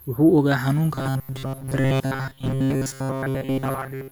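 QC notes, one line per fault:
0.95–4.11 s, robotic sound from repeated short buffers: rigid metallic 134 Hz buzz, likely from a looped 7.5 ms buffer replacing most audio; spectrogram shows fixed, evenly spaced harmonics.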